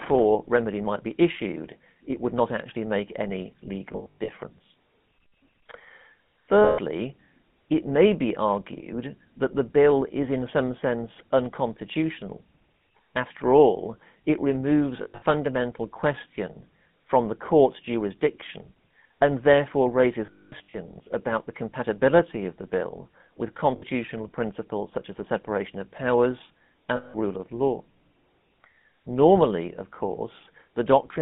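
From start to finish the speech carries the GSM full-rate codec. Its pulse-driven vocal-tract model, with the excitation thinned to every third sample, leaves a plainly audible buzzy, gravelly grain, consistent with a 13 kbps voice channel. The band runs from about 150 Hz to 3.6 kHz. That grain, rather than the warbling or swirling of a transform codec, is what identifies GSM.

Lost GSM frames then break in six times. From 3.92 to 4.29 s, after "not actually make any", about 220 ms goes missing in short scattered runs. The next losses are 6.64–6.79 s, and 15.02–15.22 s, again broken up, with runs of about 70 ms. The worst is 20.26–20.75 s, between "jurisdiction and therefore raises" and "about the compatibility of", with one stretch near 200 ms long. The last two are a brief one at 23.76 s and 26.96–27.16 s, between "the separation of powers" and "rule of law". Each gap is filled by repeating the last good frame, which gives a rough metallic ring. 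That held ring, rather than a clean drop to silence, is what marks GSM concealment rather than a plain dropout.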